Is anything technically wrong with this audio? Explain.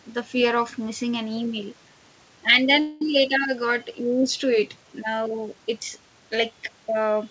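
Yes, there is a call audio freeze from 2.80 to 3.02 s. For about 0.21 s the last sound is stretched into a fading buzz, then the speech resumes exactly where it stopped. The likely cause is packets held up in transit until the jitter buffer ran dry. Unlike packet loss, nothing is cut out; the rest of the clip simply arrives about 0.21 s later. The band limit at 8 kHz fits a G.722 call path.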